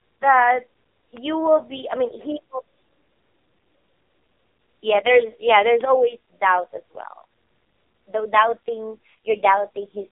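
Throughout, the speech carries heavy AMR narrowband mobile codec damage: a buzzy, synthetic quality, consistent with a very low bitrate near 5 kbps. The spectrogram shows energy confined between 300 Hz and 3.7 kHz, with nothing above, and smeared harmonic structure.

At 1.17 s and again at 5.81 s, a bit error spike produces a single sharp tick. A flipped bit makes the sample value jump by a power of two and snap back. The waveform shows a lone vertical needle, and the spectrogram a thin full-height line.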